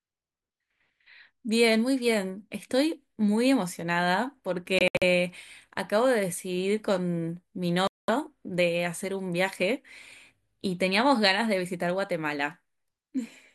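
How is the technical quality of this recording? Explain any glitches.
Two glitches mar the recording. Both are Bluetooth dropouts, likely from packets reaching the headphones too late and being discarded. The speech drops abruptly to silence and resumes as though it had played on. At 4.79–5.03 s, about 140 ms is lost in short gaps, the longest 70 ms. At 7.87–8.10 s, 209 ms is lost.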